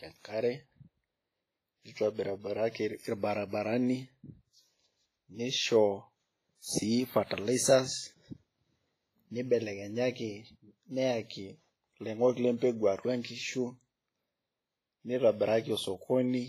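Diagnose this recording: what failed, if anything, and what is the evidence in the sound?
Across the whole clip the speech sounds washy and ringing, with a hiss that swells and fades along with the voice, smearing consonant edges over tens of milliseconds. Nothing is present above 15.2 kHz. At the codec stage, the likely cause is heavy WMA compression at a low bitrate, around 24 kbps. Its long transform blocks spread quantisation noise across time, and its coarse bit allocation zeroes weaker spectral lines, leaving that breathing, watery texture.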